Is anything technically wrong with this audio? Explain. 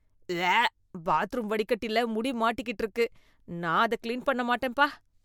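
No, the signal shows no technical faults that can be heard.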